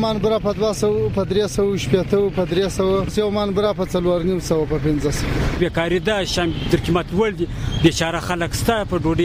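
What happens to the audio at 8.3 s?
Nothing goes wrong at 8.3 s: the audio plays through that moment intact, with no dropout, click, distortion or other audible fault.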